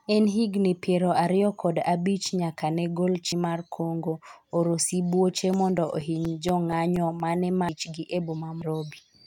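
At 3.32 s, right after "abich nyaka ne gol", the speech jumps ahead by about 0.7 s where compressed frames were skipped. Whole frames were missing or rejected by the decoder. The jump is a multiple of roughly 93 ms frames. The same skip recurs at 7.69 s (about 0.5 s lost) and 8.62 s (about 0.4 s).

From 5.30 to 7.20 s, nine CD scratch ticks arrive at a steady rate of about five a second, each only a few milliseconds long. A blemish exceeded error correction once per disc rotation, and their regularity separates them from the isolated frame skips.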